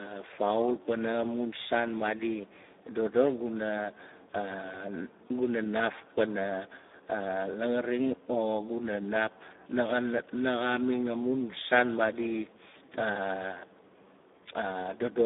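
Throughout, Speex codec coding at a rate that fits about 8 kbps starves the excitation, leaving hoarse, noisy speech confined to 250 Hz to 3.7 kHz.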